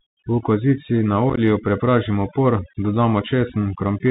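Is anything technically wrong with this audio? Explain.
Yes, three faults affect this speech.

Throughout the clip, the background drops to near silence dotted with twinkling specks. This is overdone noise removal. The noise reduction was set too aggressively, so any frequency band close to its noise estimate was pushed far down or switched off. Quiet parts of the speech fell into that range and were stripped away with the noise, which leaves the isolated chirps.

Also throughout, the speech is dull and boxy with nothing above 4 kHz, s sounds come out scratchy, and a granular hiss sits beneath the voice. Louder, brighter sounds break up. These are the marks of the Bluetooth CVSD headset codec, which fits its 64 kbps link. Each sample is reduced to one bit saying up or down, with an adapting step size. When the signal changes faster than the step can follow, it distorts, and the coarse tracking leaves the hiss.

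Between 1.30 and 1.40 s, right after "kozici na" and just before "prepražimo por", the voice becomes rough and chopped, with tiny abrupt gaps. This is unconcealed Bluetooth headset packet loss. About 37.5 ms of audio was lost in scattered pieces across 75 ms, with the longest gap 15 ms, which points to a handful of dropped packets. The missing stretches were filled with silence rather than smoothed over, and the speech comes back briefly quieter after each gap.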